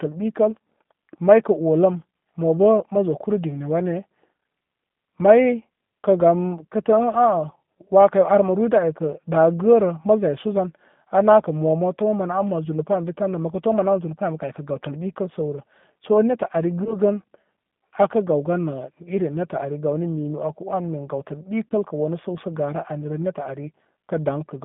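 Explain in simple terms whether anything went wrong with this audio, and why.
Two things went wrong. Throughout the recording, the speech has passed through the G.729 codec, a phone-call compressor that rebuilds the voice from a simplified model instead of storing the real sound. That is why it sounds a little rough and synthetic, and why everything above about 3.6 kHz is missing, leaving a thin telephone tone. Simple muffling would stay smooth, but this roughness follows the voice itself, which points to the codec.

The second fault is VoIP packet loss concealed by the speech codec, heard at 16.84 to 16.97 s and at 21.69 to 21.74 s. Each time, about 20 ms of the call never arrived, which fits a single lost packet. The decoder filled the gap by stretching the last bit of voice, so there is a short stretched sound that fades rather than a clean silent dropout. At 16.84 s the voice also stays weak briefly after the missing piece, because the codec rebuilds each moment from the one before.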